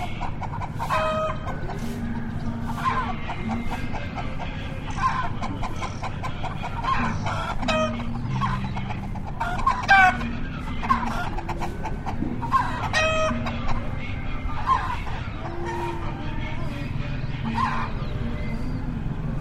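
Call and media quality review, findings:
Time-stretched section, 7.44 to 11.62 s. Audio abruptly rushes at about 1.76x speed, pitch unchanged. Likely software stretching to fit length, dropping short pieces to keep pitch.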